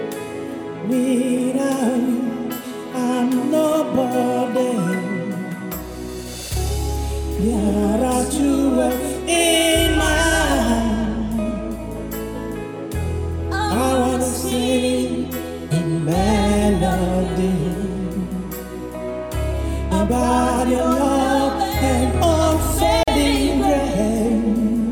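At 23.03 s a gap at a join of encoded pieces opens: a gap of about 43 ms, ending at 23.08 s, with smeared edges. Two separately encoded pieces were joined without trimming encoder delay and final-frame padding. Unlike a dropout, nothing is lost, and the sound resumes exactly where it stopped.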